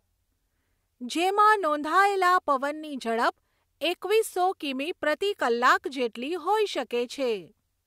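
A recording of speech, with no technical fault to be heard anywhere in it. Nothing in the signal calls for a time, a cause or a repair.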